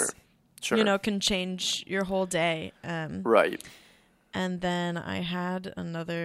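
No technical faults can be heard anywhere in the speech, and the signal holds steady throughout with nothing breaking into it.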